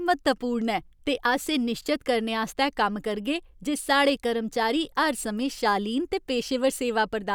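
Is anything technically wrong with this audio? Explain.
No, nothing technically wrong stood out on listening to this speech clip.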